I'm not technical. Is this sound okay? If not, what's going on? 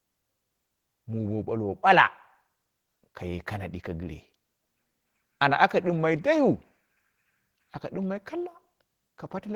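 No. Opus voice compression affects the speech from start to finish. To save space, the audio was squeezed by a voice codec working at a low data rate. Lower frequencies were rebuilt from a simplified model of the voice, and the upper frequencies by a separate layer. With so little data, the fine detail that makes a voice sound natural is coded coarsely, so the speech comes out plainly hoarse and slightly robotic throughout.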